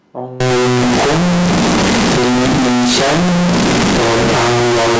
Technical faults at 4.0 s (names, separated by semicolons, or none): float read as integer